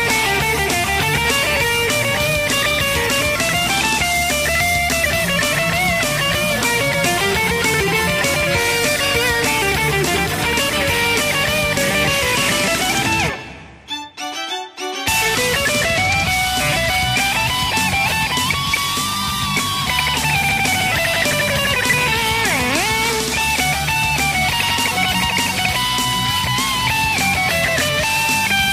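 At 5.05, 6.93, 10.14, 20.33 and 23.40 s the audio lurches forward with a short blip at each join, dropping about 70 ms, 200 ms, 70 ms, 100 ms and 70 ms respectively. These are compressed frames skipped: whole blocks of the encoded stream never reached the output, either missing or rejected by the decoder as damaged. The gaps fit frames of 23.2 ms, roughly three to seven frames lost at a time.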